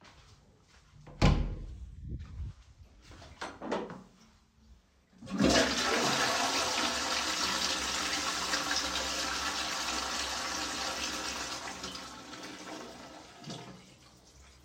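No technical faults can be heard anywhere in this recording of sounds.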